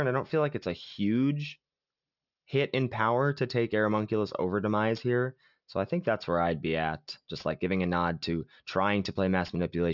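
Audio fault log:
Throughout: aliasing. Sibilants sound gritty and metallic because energy above the 6 kHz folding point was not filtered out before the rate was lowered, which points to a rate of about 12 kHz. That energy mirrors back as unrelated tones, roughly 25 dB below the speech, where a plain low-pass would only dull the sound.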